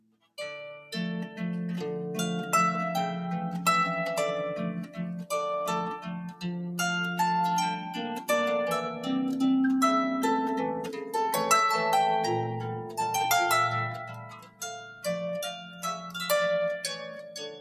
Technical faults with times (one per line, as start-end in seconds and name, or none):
0.00-17.61 noise suppressor applied to music or sounds
0.00-0.37 sound cut by the noise suppressor
5.98-6.45 sound cut by the noise suppressor
7.77-7.95 sound cut by the noise suppressor
12.75-12.98 sound cut by the noise suppressor
13.93-15.06 sound cut by the noise suppressor
15.51-16.17 sound cut by the noise suppressor
16.93-17.61 sound cut by the noise suppressor